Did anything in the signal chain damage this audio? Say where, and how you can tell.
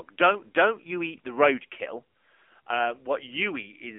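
Yes, at the codec stage. The AMR narrowband mobile codec audibly buzzes and synthesises the speech throughout, with a 250 Hz to 3.5 kHz band. The spectrogram is empty above 3.8 kHz, which fits a low-rate mode near 8 kbps.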